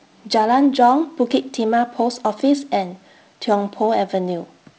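No technical faults can be heard anywhere in this speech recording. It carries G.722 wideband telephone coding, with speech reaching up to about 7 kHz, a light hiss in the upper band and a slightly noisier lower band that fits the 48 kbit/s mode.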